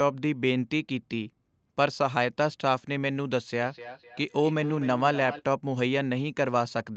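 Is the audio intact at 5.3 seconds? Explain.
No. From 3.62 to 5.45 s there is feedback echo between two devices: one device's speaker replays another's microphone, which picks it up again. The sound returns roughly every third of a second, up to about 14 dB below the speech, thinner each pass. Unlike room reverberation, the repeats come as distinct copies.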